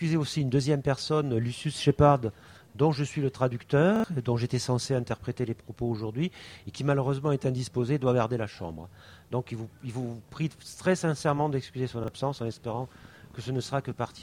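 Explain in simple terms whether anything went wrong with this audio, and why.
Repeated buffers at 3.96 s and 12.04 s: fresh audio arrived late, so the player replayed its last short chunk, which sounds like a chunk of about 40 ms. It plays three times in a row at 3.96 s and twice at 12.04 s, each with a hard join, heard as a brief stutter while a sliver of sound goes missing.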